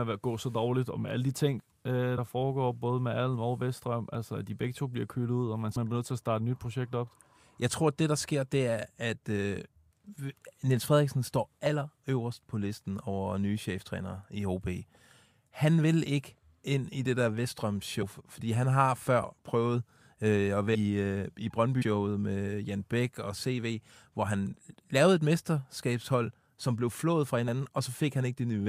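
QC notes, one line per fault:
2.17, 5.75, 11.66, 18.01–18.03, 19.24, 20.74–20.76, 21.81–21.83, 27.48 s: compressed frames skipped. Whole coded frames never play, so the speech jumps ahead, from roughly 20 ms up to about 200 ms at 20.74 s. Landmarks include "alle de ting øh" before 2.17 s and "i det der vestrøm" before 18.01 s.
14.41 s: dropped samples. A single sharp click, a thin vertical line across the spectrum. The waveform jumps straight to a later value, likely because a couple of samples, roughly 0.05 ms, went missing. That is far too brief to remove any audible sound.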